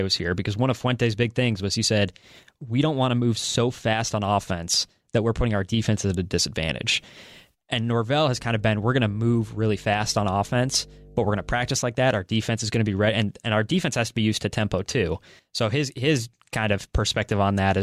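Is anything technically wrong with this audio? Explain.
Yes, there's mains hum from about 8.24 to 11.8 s, ending just before "like that". It's a steady 50 Hz drone with a few low harmonics, sitting roughly 25 dB under the speech. That points to a ground loop or a nearby transformer bleeding the power line into the signal.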